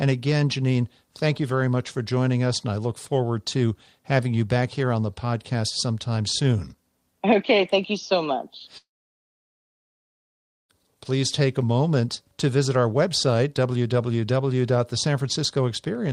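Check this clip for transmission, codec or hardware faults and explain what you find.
One fault is present: a long network dropout from 8.77 to 10.71 s. A short fading buzz gives way to about 1.8 s of silence, shown as a flat waveform and a blank spectrogram band. Speech then resumes with that stretch missing, likely because the packets never arrived.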